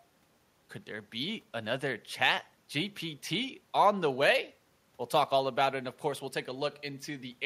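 Speech recording, no audible technical faults; nothing in the signal chain calls for attention.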